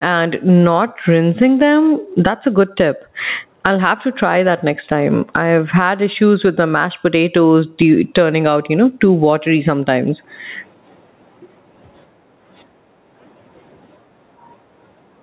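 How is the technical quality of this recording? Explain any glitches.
The main problem is gain pumping, which runs through the whole clip. The gain swings by about 20 dB, dropping whenever the speech gets loud. The likely cause is gain set far too high with a fast limiter clamping each peak, leaving everything squashed. The audio is also band-limited to 4 kHz, which fits a G.711 mu-law call path.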